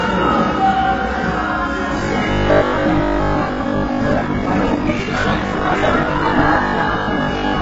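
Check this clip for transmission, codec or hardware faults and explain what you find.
Three faults are present: one across the whole clip, two later on.

Transcoding between lossy codecs runs throughout. Different artefacts sit layered together. This likely comes from a low-rate HE-AAC stage re-encoded as AAC-LC.

Robotic sound from repeated short buffers runs from 2.0 s to the end at 7.6 s. A rigid 50 Hz buzz sits on the sound. Roughly half the audio is likely replaced by repeats of about 20 ms.

A time-stretched section runs from 4.08 s to 6.46 s. The pace doubles abruptly, but pitch holds. It sounds rushed, likely from software dropping short pieces.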